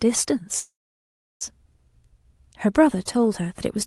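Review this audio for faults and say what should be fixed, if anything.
From 0.59 to 1.43 s a call audio freeze halts the speech. The last sound fades into about 0.7 s of silence, then resumes where it stopped. Unlike packet loss, nothing is cut out. Delayed packets likely drained the jitter buffer, and a deeper adaptive jitter buffer would prevent this.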